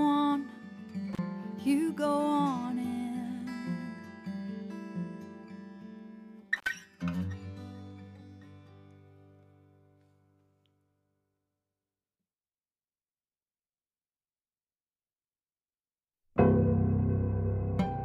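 A loose cable or plug connection breaks contact twice, an intermittent contact fault. The audio drops out with crackle at each edge, around 1.13 to 1.19 s (open for about 36 ms) and 6.56 to 6.69 s (about 63 ms), leaving faint hiss while the line is open.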